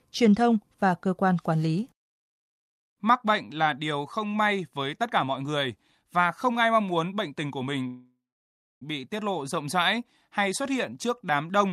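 At 7.87 s, after "muốn bệnh tình của", a call audio freeze begins. The sound stretches into a fading buzz or hiss, then about 0.63 s of silence. At 8.83 s it resumes with "bị tiết lộ" and nothing lost. This is likely delayed packets emptying the jitter buffer.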